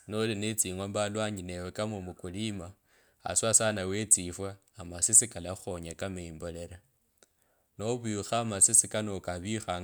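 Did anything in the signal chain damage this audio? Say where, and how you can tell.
No, nothing in the signal chain damaged this audio.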